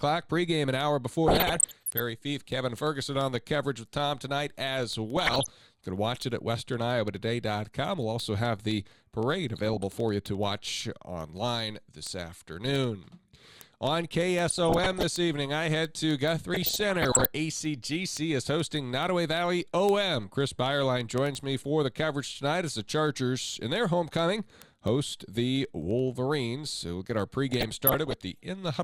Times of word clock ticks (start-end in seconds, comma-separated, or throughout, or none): 0.12-28.83